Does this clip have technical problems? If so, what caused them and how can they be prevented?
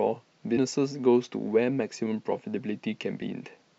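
Yes. Compressed frames are skipped at 0.56 s and 3.21 s: the speech jumps ahead by about 150 ms, then about 300 ms, not the silent gap of a dropout. Prevent it by checking file integrity and retransmitting damaged frames.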